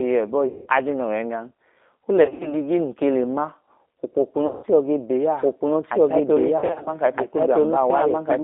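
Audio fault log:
Throughout: G.729 codec. The line is squeezed into roughly 250 Hz to 3.6 kHz, and each frame is rebuilt from a filter, pitch predictor and a few pulses at 8 kbit/s, so the speech comes across plainly rough, thin and a bit synthetic.
0.48–0.68 s, 2.24–2.56 s (just before "nun ke le"), 4.47–4.66 s, 6.58–6.92 s: VoIP packet loss concealed by the speech codec. About 180, 120, 160 and 180 ms go missing. The decoder stretches its last frame into a fading buzzy tone or coloured noise, and the speech stays weak briefly afterwards. The second and last gaps are scattered bursts.
5.41 s to the end: doubled audio track. A second, equally loud, full-band copy of the speech joins abruptly and trails about 1.5 s behind, with no room colour or decay. It's likely a second, slower capture path mixed in with the first.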